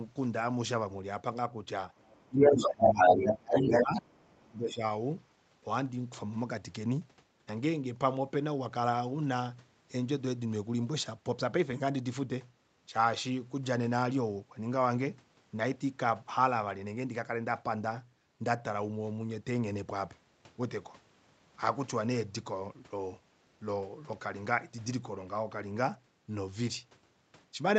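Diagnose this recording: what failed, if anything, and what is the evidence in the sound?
A second voice, the other side's voice leaking through, sits under the talker from 1.94 to 3.33 s and again from 3.53 to 4.45 s. It is stronger in the first stretch and somewhat weaker in the second. The stage is call processing. The likely cause is a loudspeaker on the talker's device feeding the microphone, with the echo canceller leaving part of that signal behind. Crosstalk in analogue wiring would run steadily under the whole clip. This leak appears only in these windows, where the far side is active.

Speech suppressed in double talk overlaps that leak. From 2.26 to 4.04 s the talker's level sags, and the deepest dips reach around 25 dB, affecting about a second and a half in total. A shorter burst of the same loss follows from 4.44 to 4.82 s. The stage is again likely the echo canceller, which cannot separate near speech from echo and turns both down. 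A codec or network gap would cut the sound cleanly for fixed lengths of time. These losses are uneven dips that overlap the far side's voice.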